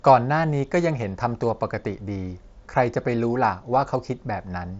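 Nothing stood out on listening to this speech, which comes over a Bluetooth headset link using the mSBC codec with its top end stopping near 7.7 kHz.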